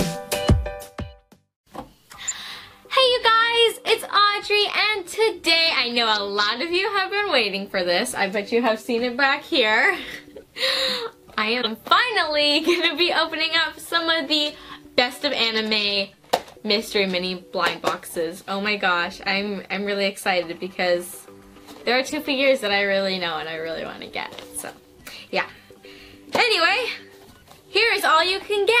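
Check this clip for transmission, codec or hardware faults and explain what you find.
The clip shows corrupt frame decoded at 2.28–2.34 s, 11.56–11.67 s, 19.47 s and 22.09–22.14 s. Damaged compressed frames were decoded as if valid, so misread gains and codes put energy at wrong frequencies. Each event is a brief chirp or noise burst; the first two are loudest, and the last two are quieter.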